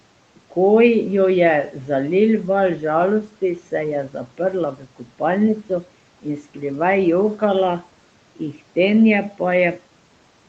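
A speech recording in which the noise suppressor cuts into the speech between 4.75 and 5.2 s. Over roughly 150 ms within that span, quiet speech detail was mistaken for background and pulled down along with the room noise, by up to about 10 dB at the deepest point, so soft consonants and trailing sounds come across swallowed and faint. The room noise sits about 25 dB under the speech, and the call path limits the audio to nothing above 8 kHz.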